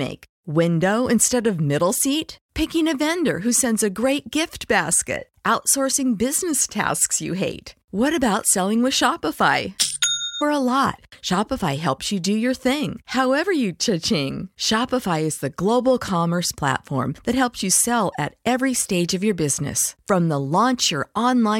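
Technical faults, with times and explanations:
10.40 s, stream segment skipped: the speech jumps abruptly forward, with a brief blip at the join lasting well under a twentieth of a second. Material is missing at this point rather than merely stalled, since playback resumes at a later position instead of picking up where it stopped. The likely cause is a segment of the stream that failed to load, with the player moving straight on to the next one, so the content in between is lost.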